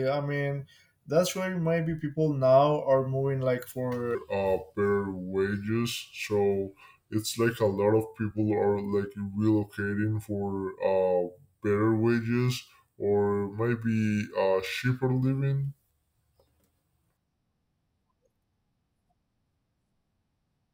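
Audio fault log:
4.15 s to end: section at the wrong speed. After "now are moving like", the speech slows to 0.81x and drops about four semitones, likely from a clock mismatch.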